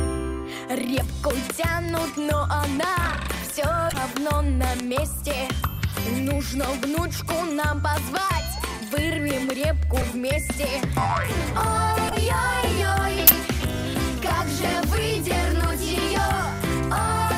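Bit error spikes sit at 0.94, 1.89, 3.50, 4.80, 7.99 and 13.70 s. A flipped bit in one sample, or three consecutive samples at 0.94 and 4.80 s, makes the waveform leap by a power of two and snap back, giving a single sharp broadband tick unrelated to the surrounding sound.

Corrupt frames decoded appear at 1.61–1.66, 3.89–3.98, 9.98–10.03, 12.08–12.15, 13.27–13.33 and 15.25–15.29 s. Damaged compressed frames were played anyway, so misread gains and codes scatter energy into wrong frequencies for a few frames each. The result is brief chirps or noisy blips, the loudest nearing about −5 dBFS.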